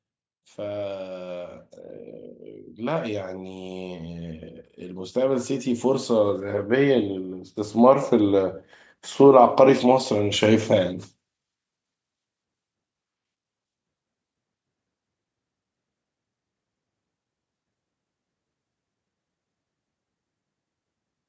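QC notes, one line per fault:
4.82–8.59 s, automatic gain rising: the automatic gain control decided the input was running quiet and ramped its gain up by about 8 dB over nearly four seconds. Because it's boosting the whole signal, the speech and the background swell together rather than the speech alone getting louder, so you hear the room creep up along with it. That slow, joint lift is the giveaway. The call microphone processing's band limit, nothing above 8 kHz, isn't part of this.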